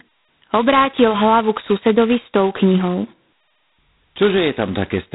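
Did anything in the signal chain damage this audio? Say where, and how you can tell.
Yes, the damage comes from the codec stage: G.726 ADPCM coding is audible for the whole clip. A harsh, rasping hiss rides on the speech and rises and falls with its level, and nothing passes above about 3.9 kHz. The codec sends only a few bits per sample of difference from an adaptive prediction. The heavy granular noise points to the 2-bit, 16 kbit/s mode, where quantisation error is coarsest and tracks the signal.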